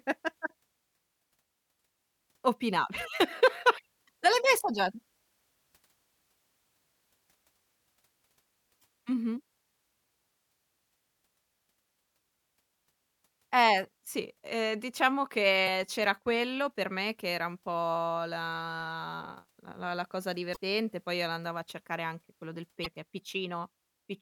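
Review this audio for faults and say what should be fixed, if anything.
Five brief glitches (chirps, squawks, clicks or short holes) cut into the speech at 0.46–0.50, 8.79–8.84, 15.64–15.68, 20.52–20.57 and 22.82–22.86 s, each about 40 ms. This is damaged data in a compressed stream: corrupted bytes make the decoder misread frames, lose sync and hunt for the next header. Re-encode from an intact source and verify file or stream integrity, for example with checksums, before distribution.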